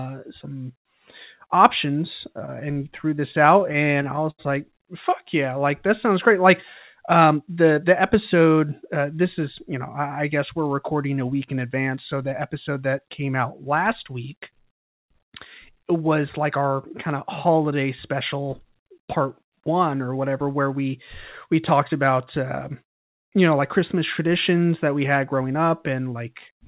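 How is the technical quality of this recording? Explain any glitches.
The recording has been through a narrowband call path, with nothing above 4 kHz, which fits G.711 mu-law at 64 kbps. It has two kinds of timing glitch: a burst of stutter early on and three short speed-ups later.

Repeated stalls (stutter), 2.46 to 4.41 s: the speech catches and drags twelve times in under two seconds. The jitter buffer kept running dry because packets arrived late, and each time the receiver stretched the last sound to cover the wait. About 198 ms was filled this way, roughly 10% of that span, with the longest gap 78 ms. Nothing is lost, but the rhythm breaks up.

Jitter buffer speed-up, three spots. The first runs from 7.16 to 7.57 s, between "that sounds great like" and "the episode uh this", at 111% speed. The second runs from 22.59 to 23.21 s, between "we we talked about" and "you know like christmas", at 106%. 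The third runs from 25.16 to 25.63 s, right after "christmas traditions that we", at 108%. In each case the buffer had built up excess audio and trimmed it by cutting out pitch-period-sized slices, around 40 to 50 ms in total per spot. The speech briefly sounds hurried while the pitch stays the same.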